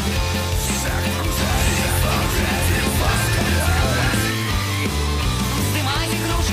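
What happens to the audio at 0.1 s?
Nothing goes wrong at 0.1 s; the audio plays through that moment intact, with no dropout, click or distortion.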